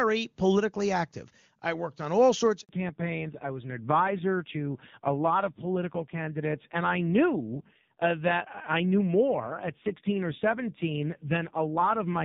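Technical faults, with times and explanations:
2.61–2.69 s, handover gap: the speech drops out and stays silent for 80 ms. The call was passed from one network to another, and no speech frames reached the decoder during the switch. With nothing to play, the decoder lets the sound die away within a few tens of milliseconds and holds silence until the new link delivers frames. Whatever was said in that window is lost, not delayed.
2.69 s to end, fallback to narrowband: up to the gap, the AMR wideband (HD Voice) codec carries the speech cleanly, with the open, airy top end of a high wideband rate. When the new link starts, the call has dropped to a narrowband codec, and nothing above 4 kHz remains. Sibilants lose their hiss and the voice turns muffled and boxy. A rough grain also appears, which fits a low-rate narrowband AMR mode around 5.9 kbit/s.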